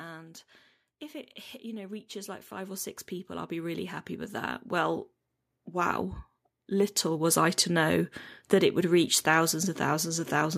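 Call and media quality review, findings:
Automatic gain rising, 1.11–6.05 s. Speech and background noise swell together, level climbing about 15 dB over roughly five seconds. Component: AGC stage. Input judged too quiet, so gain ramps gradually, lifting the noise floor along with the speech.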